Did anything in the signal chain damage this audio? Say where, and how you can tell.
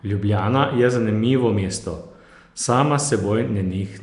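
Yes, at the codec stage: speech throughout has a rough, hissy halo and a smeared, underwater quality, with nothing above 10.6 kHz. This is likely Nellymoser compression: empty bands are noise-filled, giving hiss rather than the chirpy, swirling artefacts of MP3-style coders, at a rate fitting about 44 kbps.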